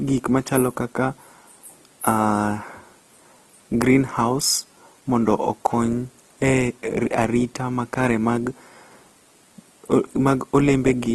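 From start to finish the speech sounds grainy and rough, with a gritty, noisy texture where the tones should be smooth, and there's nothing above about 12.3 kHz. That's likely Opus compression running in its music (CELT) mode. When bits run short, that mode keeps each band's energy but fills the detail with folded or noisy content. The roughness and the damage you can plainly hear fit a low bitrate of around 16 kbps.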